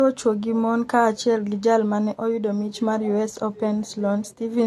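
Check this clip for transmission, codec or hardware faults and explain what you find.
One codec fault runs through the whole clip. The speech sounds dull, with nothing above 12.6 kHz and two layers of artefacts heard together. The likely cause is transcoding between lossy codecs, an AAC-type encode re-encoded as Vorbis at low bitrates. Vorbis spent its bits on AAC's existing damage, added its own, and kept the lower cut-off.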